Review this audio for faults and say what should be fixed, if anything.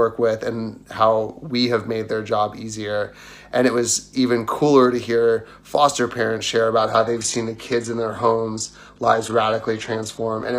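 From 6.77 s to the end at 10.58 s, an adaptive stream at a lower bitrate abruptly swaps in a lower-quality rendition without any gap. Content above 12.3 kHz disappears, consistent with a step from a high-rate AAC stream to low-rate HE-AAC. Fix it by raising the minimum rendition bitrate or buffering further ahead, so a brief bandwidth dip doesn't force a downswitch.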